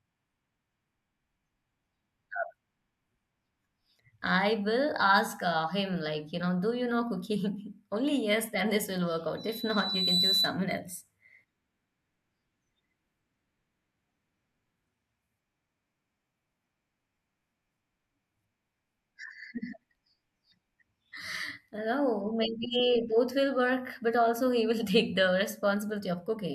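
At 9.37 s a loudspeaker feedback squeal kicks in: the mic is hearing its own speaker, and around 4 kHz the loop gain tops one. The tone swells for under a second until it sits a few dB over the speech, then stops at 10.59 s.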